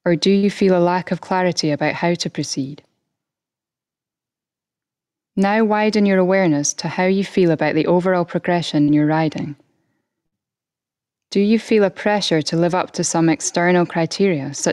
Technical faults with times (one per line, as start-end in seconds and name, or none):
0.00-14.73 gain pumping
0.37-0.45 burst of packet loss
8.82-8.91 burst of packet loss
10.26-10.35 burst of packet loss